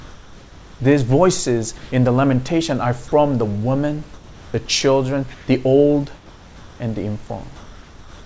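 A speech recording in which the pauses lose their natural background: at 1.78–1.92 s, 4.14–4.54 s, 5.34–5.48 s and from 7.56 s to the end, the room ambience, sitting about 20 to 24 dB below the loudest speech, gives way to a smooth, detail-free hiss, shifting level by up to about 2 dB. This is comfort noise in place of the background, likely from discontinuous transmission: the sender stopped sending during silence and the receiver synthesised RFC 3389 noise shaped to approximate the real background. Twice the sound itself is cut away. At 3.08–3.12 s about 20 ms of sound disappears into the same steady noise, and at 4.66–4.68 s about 10 ms goes. These are likely sound dropped by the voice detector, which took the sound for background and handed the gap to the comfort-noise generator until it triggered again. Throughout, nothing is heard above 8 kHz, consistent with a G.722 wideband call path.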